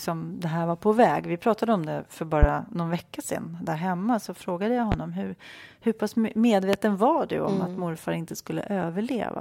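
A sudden voltage spike, likely from a plug, switch or static, hits the speech three times, at 2.43–2.46, 4.92–4.95 and 6.73–6.77 s. Each gives a single loud pop roughly 15 to 20 dB above the speech, which carries on underneath.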